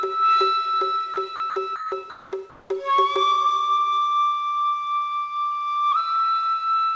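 The sender's voice detector likely mistook parts of the sound for background and stopped transmitting, so the receiver inserted comfort noise. This is sound dropped by the voice detector, heard as brief gaps filled with flat noise at 1.14 s, 1.36–1.40 s, 1.50–1.56 s and 1.76–1.92 s. The final gap is the longest, at 160 ms.

Transmission then likely paused during quieter stretches, and the receiver synthesised comfort noise in place of the background from 2.10 to 2.32 s and again from 2.50 to 2.70 s. That background sits about 24 and 30 dB below the loudest sound. Its texture turns steady and featureless while the level barely changes. Throughout the clip, the G.722 call codec leaves nothing above 8 kHz.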